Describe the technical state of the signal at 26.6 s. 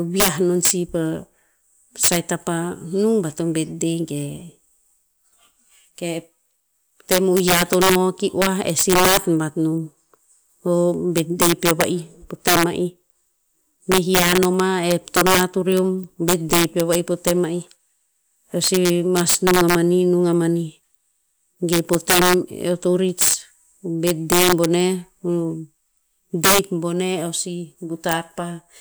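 Integer overflow affects the speech at 26.6 s, as throughout: driven about 11 dB over, roughly one percent of samples wrap to the opposite sign, cracking violently, seen as tall vertical spikes and broadband spectrogram streaks.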